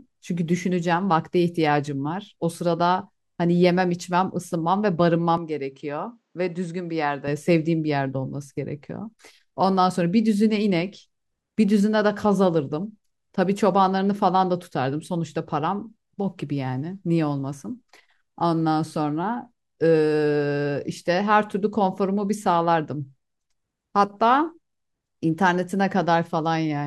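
From 5.37 to 7.28 s the speech turns duller and slightly quieter, with nothing above 8.4 kHz, likely an input switched to a poorer device.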